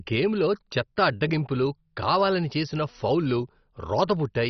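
From start to finish the speech is dull, with nothing above about 6.1 kHz, and carries a gurgling, granular roughness, most likely from heavy MP2 compression. Layer II divides the signal into 32 equal sub-bands, and at a starved rate, which fits something near 32 kbps, the upper bands are switched off while the remaining ones are coarsely quantised. Unlike a plain low-pass filter, the cut-off flickers and the surviving bands gurgle.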